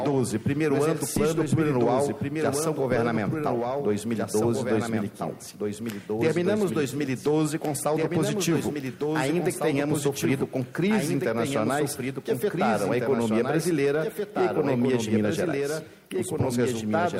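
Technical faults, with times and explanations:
Throughout: doubled audio track. A second full-band copy trails by about two seconds, some 5 dB quieter, with no decay, likely from a slower capture path.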